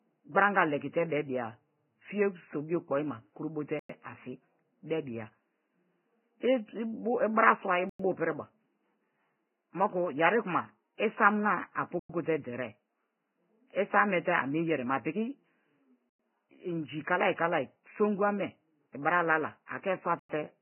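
Speech, with heavy codec damage throughout. Nothing is present above 3 kHz. The treble that remains is hissy and grainy. Tones sound rough, and onsets are smeared. The likely cause is Vorbis compression at a very low bitrate, around 10 kbps. Five gaps between chunks also cut into the audio. Each is a hard-edged hole of silence lasting 100 ms. They fall at 3.79, 7.89, 11.99, 16.09 and 20.19 s, the fourth just before "inji kalai kalai songu". The spacing fits 4-second chunks with silence left at each join.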